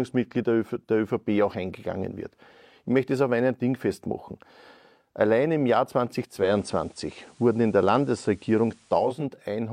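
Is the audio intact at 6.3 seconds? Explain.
No. From 6.23 to 9.29 s the receiver is digital radio blending to analogue, cross-fading over 0.36 s to FM, so hiss rises and level shifts about 2 dB.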